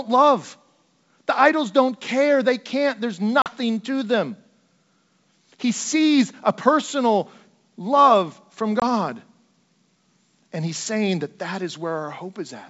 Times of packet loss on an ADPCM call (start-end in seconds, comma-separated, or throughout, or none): 3.42-3.51, 8.80-8.83